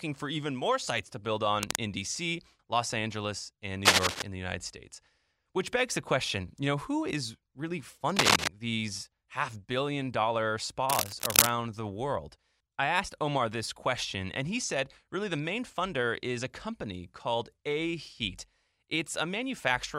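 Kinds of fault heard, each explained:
cable scratch noise: four bursts of ragged rustling at or above speech level, likely a worn connector moving; broadband spectrogram smears, jagged waveform spikes.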